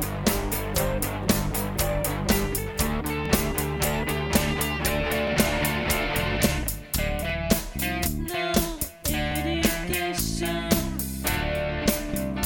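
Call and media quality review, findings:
Overlapping chunks. Short click or stutter at 1.24, 3.26, 5.28, 7.30, 9.32 and 11.34 s, each 20 ms long. Regular spacing, just over 2 s. Probable component: chunked buffering or transport stage. Each 2.0 s chunk starts 20 ms before the previous one ends. That 20 ms segment plays twice at every join. Doubled audio breaks the waveform's continuity and is heard as a periodic tick. Check chunk offset and hop logic.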